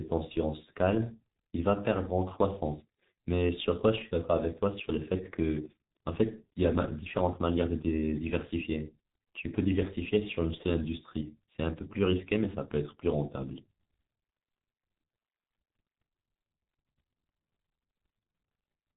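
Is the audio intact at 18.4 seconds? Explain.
No. At 18.4 seconds, as everywhere in this speech, the sound is muffled and hoarse, with blurred, smeared consonants and nothing audible above about 3.8 kHz. This is heavy G.723.1 codec damage, present throughout the clip. The codec chops the signal into 30 ms frames and rebuilds it from a coarse, slowly updated voice model, which fits a bitrate of about 6.3 kbit/s. Fine detail and quick transitions are lost.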